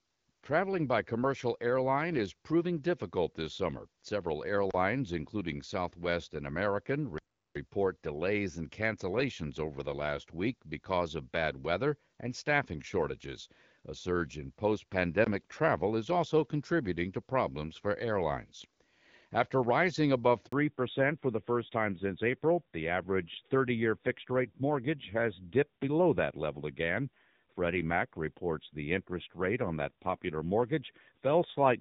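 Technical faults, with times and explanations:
4.71 s, 7.18 to 7.55 s and 15.24 s, block of digital silence: three spots where the audio drops to silence without any fade and then comes back. At 4.71 s it lasts about 31 ms. At 15.24 s, right after "surge in post", it's about 19 ms. The one at 7.18 s is a proper hole of about 0.37 s just before "delays and cancellations over". That length fits a 16384-sample buffer the program didn't fill in time.
20.46 to 20.52 s, handover gap: just after "rising above" the speech fades out fast and there's about 60 ms of silence. Nothing was arriving while the call switched from one network to the other, so whatever was said in that window is gone. It's short, but you can hear the sentence lose a bit before the new link comes up.
20.52 to 31.80 s, fallback to narrowband: right after the handover the call drops from HD Voice at 12.65 kbit/s down to the older narrowband AMR at 7.4 kbit/s, and it stays there to the end. 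Nothing is left above 4 kHz, so the sibilants and the airy top go dull and the speech gets rougher. Before 20.5 s the wideband codec was running at 12.65 kbit/s with only light coding damage, and the top end was clearly still there.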